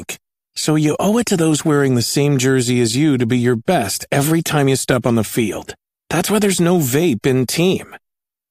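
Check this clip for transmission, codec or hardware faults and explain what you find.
No transmission, codec or hardware faults can be heard.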